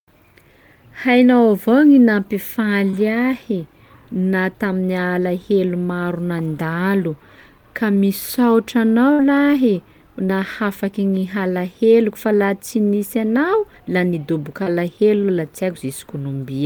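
Short concealed packet loss occurs at 2.90–2.94 s, 7.95–7.97 s, 10.26–10.29 s, and 14.63–14.67 s just after "nisy anao la nidoboka". Each time, 10 to 30 ms of speech failed to arrive and the receiver patched it by extending the preceding sound. The result is a brief smear or wobble. On a spectrogram, the harmonics flatten or blur for a sliver of time, with a slight seam in the waveform.

A burst of packet loss at 9.13–9.20 s removes 60 ms. The receiver continued the last sound and faded it, producing a held buzz or dying hiss before speech resumes further along. On the spectrogram this appears as a frozen, decaying band. The waveform shows a tapering envelope and an abrupt restart.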